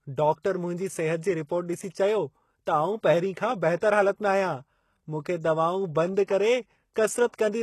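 From start to finish the speech has a gritty, metallic top end. The s sounds come out lispy and the treble stops entirely at about 12.3 kHz. This is plainly audible codec damage, likely from HE-AAC compression at a low rate, which fits a bitrate around 16 kbps. At that rate the codec spends its bits on the lower spectrum and fakes the treble by copying lower bands upward under a coarse envelope. The rebuilt highs are not the original, and their harmonics no longer line up with the real ones below the crossover.

At 3.76 s a short hiss creeps in just ahead of a sharp attack. It lasts about 58 ms, to 3.82 s, and leaves the onset itself sounding softened and smeared. This is pre-echo. The transform coder spread its quantisation noise evenly across a block in which the loud attack arrived late. That noise, sized for the loud part, also filled the quiet stretch before it, so it is heard as a brief wash of hiss announcing the attack.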